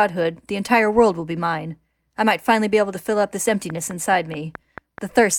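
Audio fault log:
3.49 to 5.2 s, train of clicks: just after "to fill up this", a steady ticking starts at about 4.7 clicks a second, roughly ten pulses of much the same shape, sitting about 10 dB above the speech. That regular repeating pulse is most likely interference from nearby equipment or a faulty connection or power supply.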